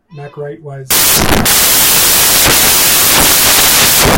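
From 0.91 s to the end, the speech turns into loud, harsh broadband noise: samples built from the wrong bytes, each value assembled with misaligned or swapped bytes so low-order noise dominates. A spectrogram shows flat broadband fill; the waveform becomes a dense block.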